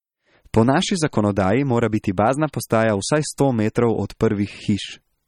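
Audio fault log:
Throughout, MP3 compression: the damage is plainly audible across the whole speech clip, with a watery, swirly quality where weak frequency lines flicker in and out from frame to frame, and the s sounds pick up a metallic chirp. Nothing gets through above 17.2 kHz, a hard treble cut-off. The likely cause is an MP3 encoder starved of bits, and the amount of smearing fits a low bitrate of roughly 35 kbps.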